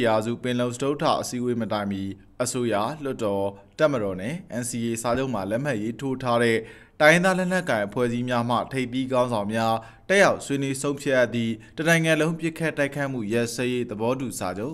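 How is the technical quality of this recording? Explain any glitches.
One glitch stands out: a single loud pop from 5.15 to 5.17 s. It is a short, sharp thump lasting under 30 ms and peaking a few decibels above the surrounding audio, while the sound carries on unbroken beneath it. The likely cause is a sudden voltage step or spike, from a plug, a switch, a static discharge or a driver hiccup, entering the signal path, where the following circuitry shapes it into a brief pulse.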